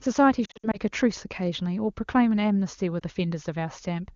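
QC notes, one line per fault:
0.45–0.77 s, lost AMR speech frames: about 160 ms of speech drops out in short bursts spread over 280 ms, the longest lasting 60 ms, which fits about eight lost 20 ms frames. The decoder fills each gap by repeating the last good pitch and vocal tract settings at falling gain, so the speech warbles and fades to near silence within two frames rather than clicking. The voice comes back weak or rough for a moment after the gaps.
2.99–3.04 s, lost AMR speech frames: a single missing frame of about 20 ms gives a brief dip or warble. Concealment bridges the gap smoothly, so it sounds like a momentary wobble in the speech, not a dropout or a splice click.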